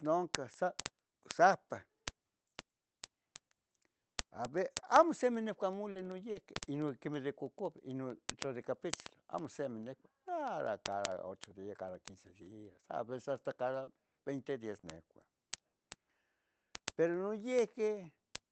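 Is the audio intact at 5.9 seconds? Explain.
No. Around 5.91 to 5.98 s the speech briefly smears and wobbles. This is short concealed packet loss: about 40 ms of the call audio arrived too late for the decoder, so the receiver bridged the gap by extending the preceding sound, continuing its pitch or its noise character, then crossfaded back into the genuine signal once packets resumed on the call path.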